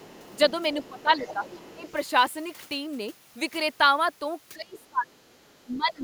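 Other side's voice leaking through, 0 to 1.92 s: a faint second voice sits well under the talker, likely echo the canceller left in the microphone signal.

Speech suppressed in double talk at 0.21–0.38, 0.89–1.43, 1.76–1.86, 4.53–5.45 and 5.65–6.04 s: the talker's voice dips, slightly at first, then sharply, nearly vanishing around 4.5–5.5 s, likely the canceller muting both sides.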